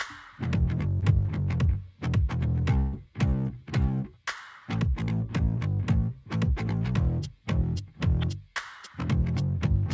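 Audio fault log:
1.00 to 1.04 s, short concealed packet loss: about 20 ms of audio never arrived, and the receiver bridged it by extending the preceding sound for about 21 ms before blending back. Unlike a longer burst, it passes as a brief smear or wobble, with no held buzz or fade.
2.80 to 3.07 s, burst of packet loss: about 120 ms went missing in a row, so the receiver stretched the last sound for about 128 ms, letting it fade as the gap lengthened. The result is a held buzz or dying hiss, after which the audio resumes with that stretch gone.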